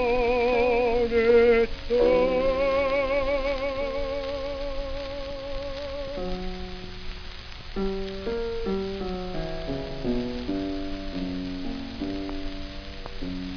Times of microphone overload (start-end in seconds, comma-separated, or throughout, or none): none